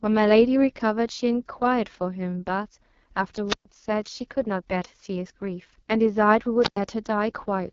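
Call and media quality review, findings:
AMR wideband (HD Voice) codec throughout: lowest-rate mode, roughness fits about 6.6 kbit/s. Coarse pulse-driven vocal tract model makes speech rough and raspy, nothing above 7.3 kHz.

Wireless microphone squelch dropout at 3.45–3.66 s and 6.59–6.77 s: FM signal fades, receiver squelch mutes output. Hiss rises, then holes of near silence of about 127 ms and 102 ms.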